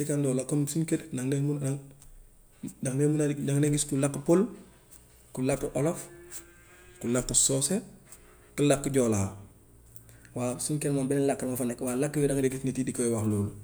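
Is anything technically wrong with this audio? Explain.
Yes. Drift correction steps occur at 6.34–7.61 s, where the speech slows 5.5% and drops about a semitone, and at 10.26–12.42 s, where it speeds 5.5% and rises nearly a semitone. Both likely come from clock-matching software abruptly changing playback rate to rebalance its buffer.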